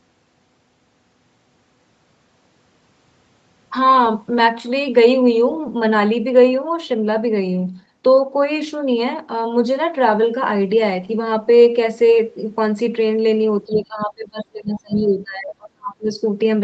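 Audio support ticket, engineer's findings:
Speech suppressed in double talk, 13.66 to 16.18 s. Talker's level dips repeatedly while far end is active, about 2 s affected in total, deepest drop roughly 30 dB. Likely cause: echo canceller / suppressor unable to separate near-end talker from loudspeaker echo during simultaneous speech, so it attenuates both. Sound pumps down and recovers in pieces rather than staying level. Band-limited to 8 kHz by call mic processing, which is expected.

Other side's voice leaking through, 13.73 to 13.78 s, 14.01 to 14.05 s, 14.77 to 15.0 s. Short scraps of far-end voice audible under the talker, about 20 dB below speech at 13.73 and 14.77, about 25 dB below at 14.01. Likely cause: residual loudspeaker echo not fully cancelled from mic path. Arrives in the same double-talk window as the suppression.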